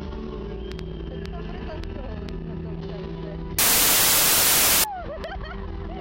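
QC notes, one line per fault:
3.59–4.84 s, wrong sample width: packed 24-bit data read as 16-bit scrambles bytes into loud noise, burying the sound at two-thirds speed and lower pitch.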